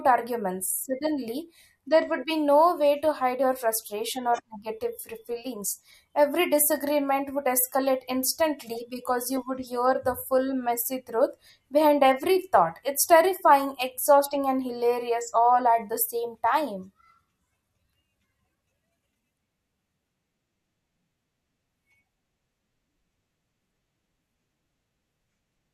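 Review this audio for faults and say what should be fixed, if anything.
Nothing to fix; no faults are audible in the speech at any point.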